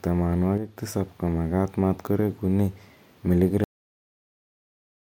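From 0.58 to 0.77 s the speech level drops abruptly by about 6 dB and then returns, with no other change in tone. This is likely one channel dropping out, leaving the mono sum carrying only the remaining identical channel for that stretch.

At 3.64 s there is a cut-off end: the speech stops in the middle of a sound and falls straight to silence with no natural decay, because the final buffers were never written or played, leaving silence through to the end.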